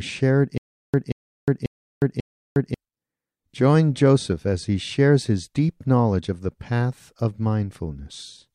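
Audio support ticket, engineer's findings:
Stutter with silent gaps, 0.58–2.74 s. Same 182 ms speech burst replays four times, about 360 ms digital silence between, 541 ms period. Likely player/stream buffer stall re-serving last fragment. Waveform: identical blocks separated by flat silence; spectrogram: repeating columns, empty gaps.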